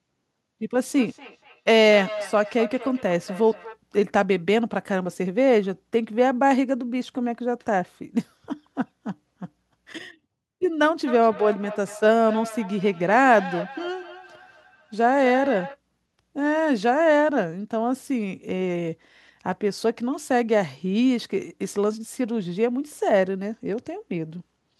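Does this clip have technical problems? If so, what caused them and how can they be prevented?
Yes: feedback echo between two devices, 0.9–3.8 s and 11.1–15.8 s, repeating about every fifth of a second at up to about 12 dB below the speech. One device replays the other's call audio into its microphone. Mute one, or use headphones.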